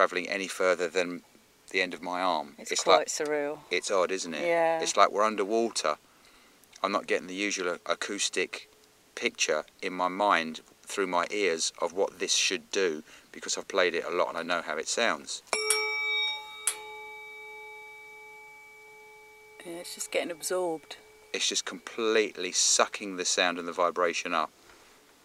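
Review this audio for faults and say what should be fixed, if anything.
Nothing here needs fixing.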